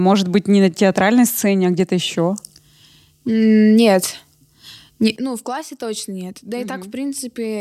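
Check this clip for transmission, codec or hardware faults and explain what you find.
Two kinds of fault are present in the speech: two isolated clicks and one abrupt level change.

Dropped samples: at 1.80 s, just after "на театральной сцене а", and again at 5.55 s, a sharp single click is heard. The likely cause is a handful of missing samples, so the waveform jumps discontinuously.

Sudden gain jump: at 5.16 s the level falls by about 12 dB and stays there to the end. Speech and background noise drop together, pointing to a gain change applied without a ramp.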